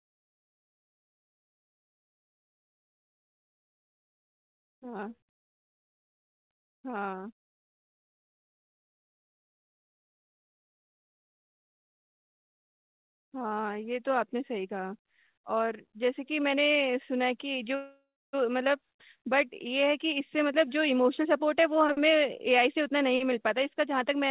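Speech over a narrow call path, with nothing above 4 kHz, which fits G.711 mu-law. A jitter buffer slow-down stretches 3.00 to 7.63 s and 11.27 to 13.67 s, running at 94% speed at unchanged pitch. It adds 271 ms and 142 ms. At 17.75 s a call audio freeze drags the last sound out, then leaves about 290 ms of silence until 18.35 s. The likely cause is delayed packets emptying the buffer, inserting a 580 ms gap with nothing lost. From 19.86 s to the end, a jitter buffer speed-up runs at 106%. It trims roughly 300 ms and sounds hurried.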